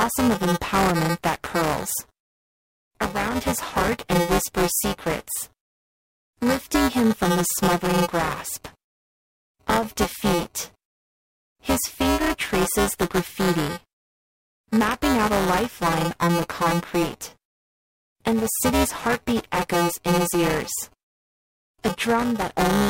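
Speech runs throughout with buffer tearing: a steady robotic buzz at 345 Hz, fitting a 128-sample buffer, present only while sound plays. Roughly a fifth of each period repeats audio about 10 ms older, leaving hard waveform joins and spectrogram streaks every 2.9 ms.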